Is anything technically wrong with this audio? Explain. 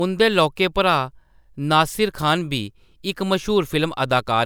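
No, nothing technically wrong turns up anywhere in this speech recording, so there's nothing here to fix.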